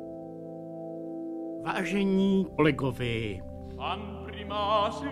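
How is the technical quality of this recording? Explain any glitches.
One glitch stands out: a very short burst of damaged data in a compressed stream at about 2.58 s. At that point a small stretch of the encoded file was corrupted, so the decoder could not read the affected frame correctly, lost its place in the stream and had to hunt for the next valid frame header before playback resumed. The result is a brief chirp or blip, lasting under 20 ms, that is gone almost as soon as it appears.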